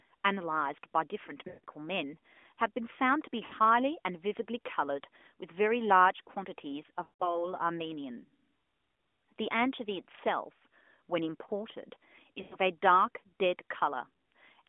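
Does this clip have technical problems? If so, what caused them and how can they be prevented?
Yes, you get lost AMR speech frames at 1.48–1.64 s, 3.46–3.54 s, 7.04–7.48 s and 12.42–12.57 s. The decoder fails the corrupted frames and keeps reusing the last good pitch and vocal-tract settings with falling gain, so each gap smears, then fades and comes back rough. The two longest fit about eight lost 20 ms frames, the one at 12.42 s fits about five, and the short one at 3.46 s fits about three. The narrowband band-limiting around it is ordinary AMR-NB. To prevent this, improve radio coverage or signal quality, or use a link with stronger error protection so fewer frames arrive corrupted.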